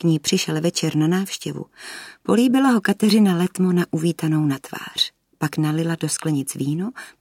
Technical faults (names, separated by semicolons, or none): none